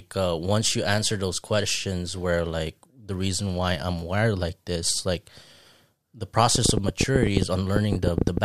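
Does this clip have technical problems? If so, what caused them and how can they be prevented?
Yes. A train of clicks runs from 6.55 s to 8.38 s: roughly twenty sharp, similarly shaped pulses at about 11 per second, spaced unevenly, each standing around 20 dB above the speech and audible in pauses as well. The likely cause is electrical interference from nearby equipment or a faulty connection or power supply, injecting the same pulse repeatedly. Keep phones and power supplies away from cables, and use a stable, well-powered interface with adequate buffering.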